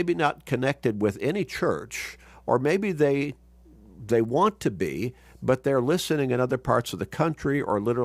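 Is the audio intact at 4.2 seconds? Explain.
Yes, at 4.2 seconds the speech plays through cleanly, with no dropout, click, distortion or other fault to be heard at that moment.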